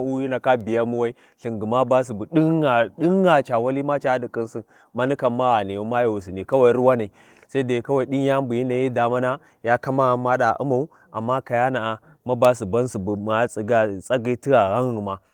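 The clip is speech, and nothing is technically wrong with it.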